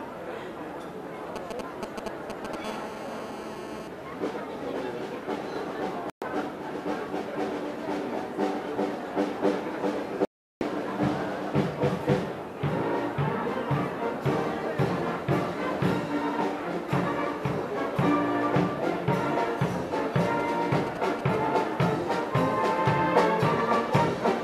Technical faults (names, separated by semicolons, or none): GSM signalling bursts; GSM phone buzz; digital broadcast dropout